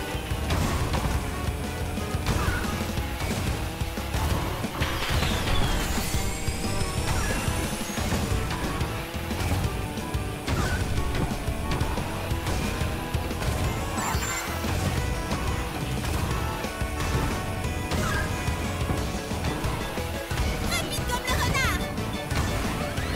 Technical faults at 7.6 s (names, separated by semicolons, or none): none